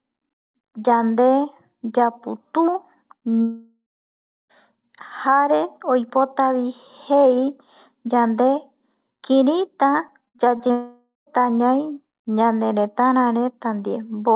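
From 3.42 to 4.51 s there is a long network dropout. The audio stops arriving for about 1.1 s, likely because the connection stalled. The receiver stretches the last sound into a fading buzz. Roughly the final 0.67 s is bare silence before the audio resumes, with the missing part gone. On a spectrogram this looks like a smeared, uniform band that decays to an empty region. In the waveform, the envelope tapers to a flat line.

At 10.08 s a block of digital silence lasting about 2.9 ms, which fits a 128-sample buffer that was not filled in time, drops the signal to silence with no fade. It is heard as a tick. The waveform shows a brief flat notch with abrupt edges. The spectrogram shows a thin full-height vertical stripe, capped at the 4 kHz ceiling set by the G.711 call path.

From 10.25 to 10.71 s repeated packet loss produces a choppy, robotic stretch. There are five gaps, the longest 58 ms, and concealed sound fills about 29% of the span. 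Each gap is patched by repeating the last sound, so on a spectrogram the harmonics freeze into short flat bars between normal sections. In the waveform, segments of repeating cycles break up the natural envelope.

That stretch runs straight into a second long network dropout from 10.71 to 11.40 s, likely caused by a further stall, in which about 0.56 s is lost. A fading buzz gives way to about 0.15 s of silence. On the spectrogram and in the waveform it has the same smear-then-blank shape as the first dropout, only shorter.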